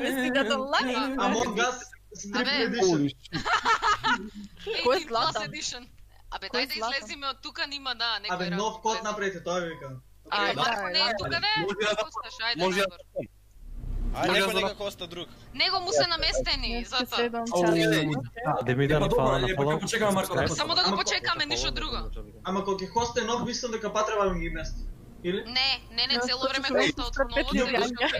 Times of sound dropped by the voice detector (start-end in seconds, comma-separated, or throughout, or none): none